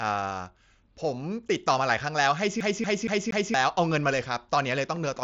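At 1.99 s, a single voice packet on the link between headset and phone went missing, a gap of about 7.5 ms, which fits one lost mSBC frame. The receiver's concealment patched the hole by repeating the closest-matching piece of the waveform just before it. That is concealed Bluetooth headset packet loss, and because only one packet dropped, the repair is almost inaudible in the speech, at most a faint blip in an already band-limited, slightly grainy wideband headset sound.

From 2.60 s to 3.54 s the playback behaves like a CD stuck on one turn: a scratch keeps throwing the laser back one track at the same point, so a stretch of about 0.23 s (234 ms) plays four times in a row. Each jump back brings a short mute, and the result is a quick, evenly spaced stutter in which the same fragment of speech is repeated before the audio moves on.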